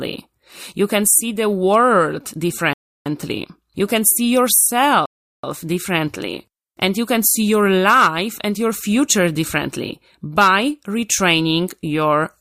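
Speech, and it stalls twice on rebuffering: the audio drops to silence from 2.73 to 3.06 s and again from 5.06 to 5.44 s, then picks up exactly where it left off. The player ran dry of downloaded data and waited, adding about 0.32 s and 0.38 s of dead air without losing anything.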